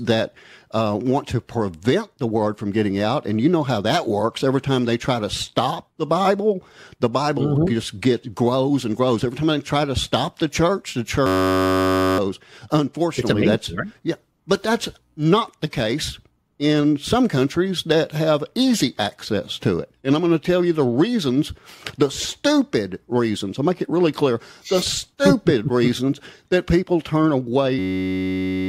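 At 11.26 s and 27.79 s, a system hang loop: the system froze and one 10.67 ms buffer, consistent with 512 samples, repeated as a steady 93.8 Hz buzz.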